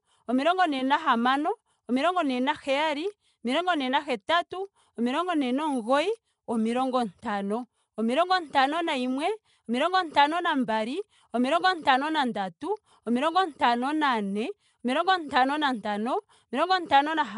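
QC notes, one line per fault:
Throughout: Nellymoser compression, likely the cause of the rough, hissy halo around the speech and its smeared, underwater colour. This codec spends a fixed, small budget on each block of samples, so weaker bands get nothing and are filled with synthetic noise. That noise gives the hiss and the blurred texture. There is no content above 10.6 kHz, and the damage is plainly audible, which fits a rate in the region of 44 kbps.
4.50 s and 12.34 s: pre-echo. A short hiss of about 10 ms comes just before each of these two sharp onsets, and the attacks themselves sound softened. The transform coder spreads its quantisation noise evenly across a whole block. When a sudden loud event lands late in that block, noise scaled for the loud part leaks into the quiet stretch ahead of it and is heard before the attack.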